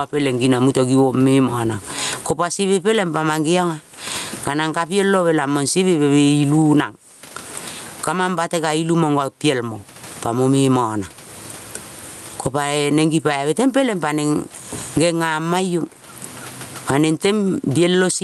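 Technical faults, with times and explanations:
Throughout, gain pumping. The swing is large, around 30 dB. The likely cause is input gain set far too high, with a fast limiter or compressor pulling it down on every loud sound. So loud and soft passages sit close in level, and the speech sounds squashed. The room noise sits about 44 dB under the speech.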